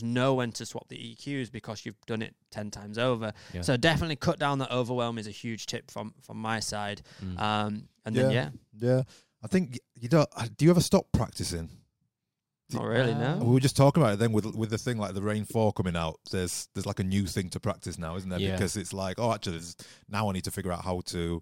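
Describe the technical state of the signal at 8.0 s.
Around 8.0 s the speech signal is intact, with no dropout, distortion, glitch or other technical fault to be heard at that point.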